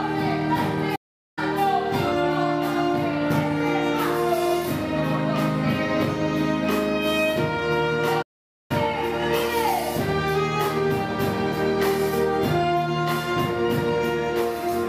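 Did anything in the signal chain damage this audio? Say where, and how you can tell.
Yes. Playback stalls at 0.95 to 1.39 s and 8.22 to 8.71 s interrupt the audio at the playback stage. Each time, the sound cuts out mid-flow into silence, about 0.41 s and then about 0.48 s, before carrying on. The likely cause is the player starving: its buffer ran dry or its output thread was blocked, so nothing reached the output until it recovered and started feeding samples again.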